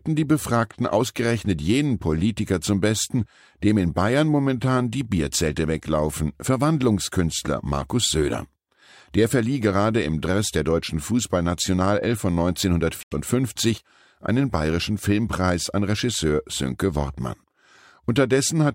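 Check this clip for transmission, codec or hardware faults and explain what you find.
One fault stands out. At 13.03 to 13.14 s the speech cuts to silence for about 90 ms. It then resumes, likely a Bluetooth stall where delayed packets emptied the headphones' buffer.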